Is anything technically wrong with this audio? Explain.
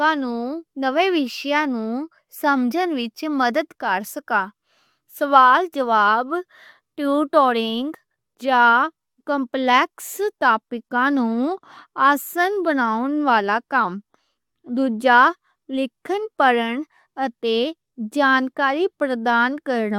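No, nothing is technically wrong with this audio.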